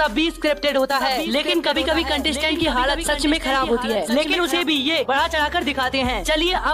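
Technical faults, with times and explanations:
1.01–4.61 s: doubled audio track, a full-band copy about one second late and roughly 10 dB quieter, likely a second capture path; unlike echo, it has no decay and abrupt edges.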